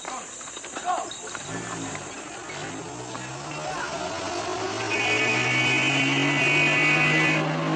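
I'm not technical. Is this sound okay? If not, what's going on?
No. From about 2.2 s to the end, software likely stretched the audio, a time-stretched section: it plays at two-thirds speed with unchanged pitch, so it drags.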